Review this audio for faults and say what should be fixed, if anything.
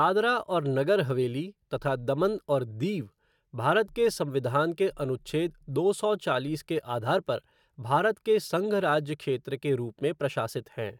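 Nothing here needs fixing, as the signal stays technically sound throughout the recording with no faults to report.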